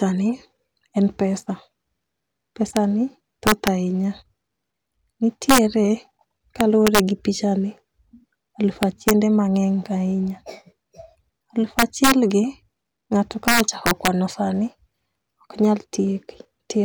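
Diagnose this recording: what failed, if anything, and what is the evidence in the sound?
Integer overflow in the fixed-point gain or sample-format conversion stage. Loud speech peaks produce violent cracks at 2.77 s, 3.47–3.68 s, 5.50–5.58 s, 6.61–7.00 s (just before "gi pichani"), 8.83–9.11 s, 11.79–12.12 s and 13.48–14.08 s (just after "ng'ato ka"). The peaks exceed full scale by up to about 3 dB. Instead of being limited, those samples wrap to the opposite sign and jump across the whole range. That is why the cracks sound far harsher than clipping.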